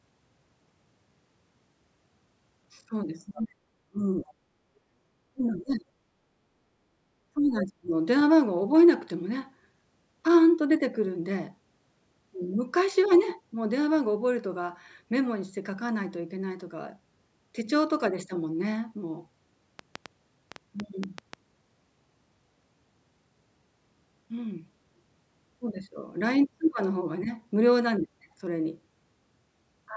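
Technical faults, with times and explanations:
3.16–3.72 s, 3.89–4.34 s, 5.33–5.90 s and 7.34–7.92 s, speech suppressed in double talk: the voice dips sharply in each span, by as much as roughly 40 dB at its deepest. This is likely an echo canceller that, with both sides talking, couldn't separate the talker from loudspeaker echo and attenuated everything.
4.00–4.04 s and 4.20–4.24 s, other side's voice leaking through: two brief scraps of a second voice surface, roughly 25 to 30 dB below the talker. These most likely come from loudspeaker playback of the far end that the echo canceller failed to fully subtract from the microphone.
4.70–4.96 s, background gated by the echo canceller: the room tone drops by about 13 dB for a fraction of a second, then returns. The microphone was pulled down hard while the loudspeaker was active and released once the canceller let go.
19.79–21.34 s, train of clicks: around ten similar ticks arrive at an uneven pace of about 5.2 per second, peaking well above the surrounding sound. 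These are likely caused by repeated pulse injection, such as interference from nearby equipment or a faulty connection or power supply.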